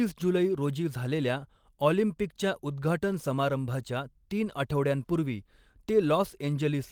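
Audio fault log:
No fault is heard in this speech clip.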